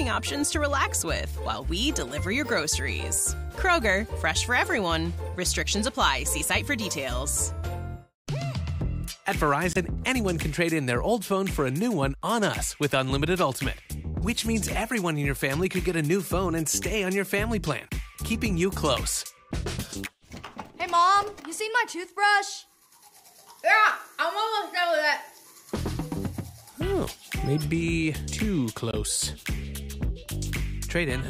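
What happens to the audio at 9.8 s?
Just before that point, from 9.73 to 9.77 s, there is a corrupt frame muted. The decoder rejected a damaged compressed frame and silence was put in its place, leaving a 36 ms hole, which fits a single frame. It cuts in abruptly with no shift in timing. On a waveform it appears as a flat line with sharp edges, and on a spectrogram as a thin, fully blank vertical strip.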